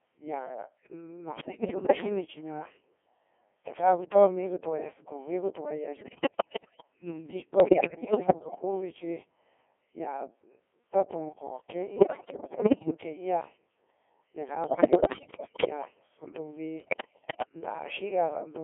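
Codec 2 vocoder artefacts run throughout. The speech is rebuilt from pitch, voicing and envelope parameters rather than the waveform, so it sounds robotic and buzzy within a 300 Hz to 3.4 kHz band, at roughly 1.6 kbit/s. Bit errors on digital voice radio occur at 1.37–2.06, 5.96–6.82, 7.60–8.62, 11.96–12.94, 14.64–15.69 and 16.80–17.49 s. Flipped bits corrupt whole frames' parameters, causing pitch jumps, level swings, warbles and robotic gibberish.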